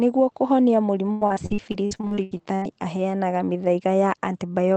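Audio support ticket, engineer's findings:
Choppy, robotic speech from 1.05 to 2.64 s: repeated packet loss (robotic sound), 14 gaps, longest 97 ms, with about 37% of that stretch concealed. Likely component: the jitter buffer and loss concealment. Lost or late packets are patched by extending the preceding sound, which gives the choppy, robotic sound. On the waveform, short repeated segments and dropouts appear. On the spectrogram, smeared, stretched harmonics break up the normal speech pattern. Upstream, the Opus call path's spectrum stops near 8 kHz.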